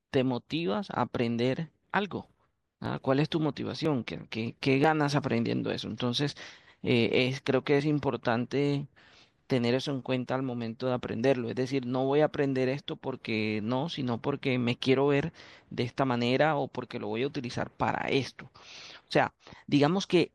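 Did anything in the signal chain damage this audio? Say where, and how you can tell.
Yes, at the streaming stage. Overlap between stream segments causes tiny skips at 0.87, 2.86, 3.85 and 4.84 s, spaced on one-second segment boundaries. Overlapping audio was trimmed away.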